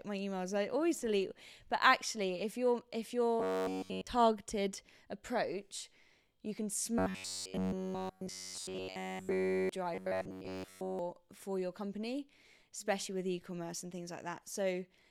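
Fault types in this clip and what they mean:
Robotic sound from repeated short buffers: at 3.40 to 4.07 s after "actually if you're if", 6.99 to 9.69 s after "approach you can", and 9.95 to 10.99 s just before "for your company especially", the speech becomes a rigid, metallic buzz near 93.8 Hz. The likely cause is audio arriving too seldom, so a snippet of about 10.7 ms is replayed over and over while essentially all of the real signal in those stretches is skipped.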